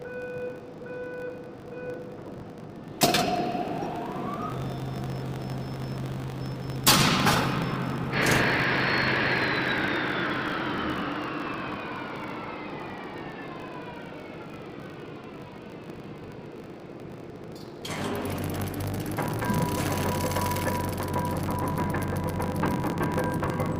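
From start to finish a filter restarted on every block, dropping its state and starting each block from silence. Each restart leaves a small transient, heard as a 50 Hz buzz that tracks the sound's level and points to 20 ms blocks. Spectrogram: vertical striations every 20 ms; waveform: regular small spikes.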